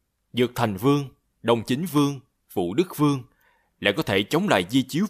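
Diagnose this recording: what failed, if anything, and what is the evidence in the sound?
Nothing failed: no stage from the analogue front end through conversion, buffering and playback leaves an audible fault anywhere in the speech.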